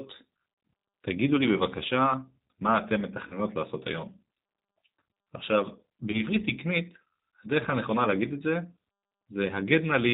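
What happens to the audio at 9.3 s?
At 9.3 s, as throughout, the speech carries G.729 codec damage: nothing above 4 kHz, and a rough, synthetic buzz from coarse pulse excitation that sets it apart from simple band-limiting.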